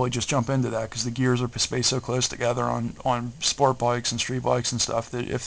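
Nothing here calls for comment, since the audio runs along without any technical faults turning up at any point.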